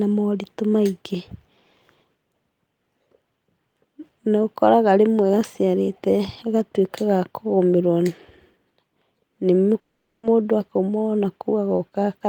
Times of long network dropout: 9.79-10.26

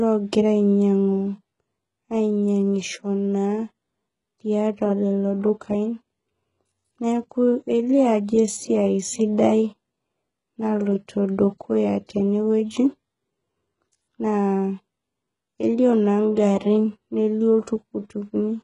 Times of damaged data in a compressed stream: none

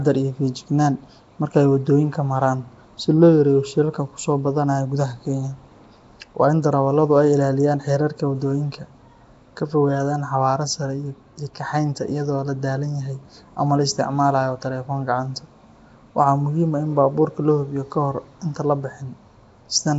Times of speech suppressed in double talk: none

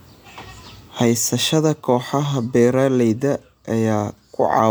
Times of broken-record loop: none

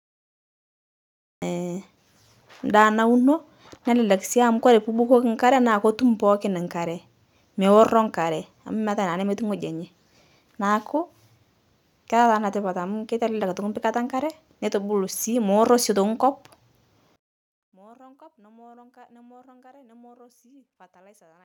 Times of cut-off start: 0.00-1.42

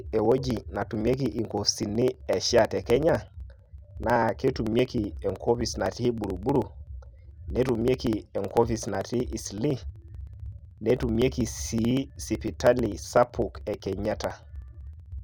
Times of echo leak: none

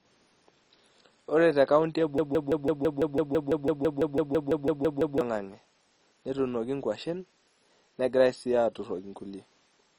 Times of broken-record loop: 2.18-5.21

